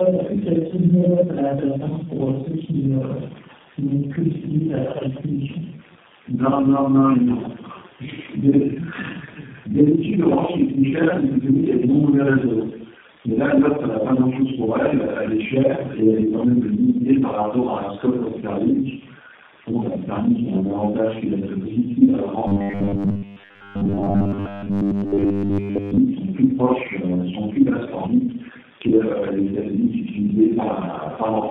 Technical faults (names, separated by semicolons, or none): tandem speech coding; robotic sound from repeated short buffers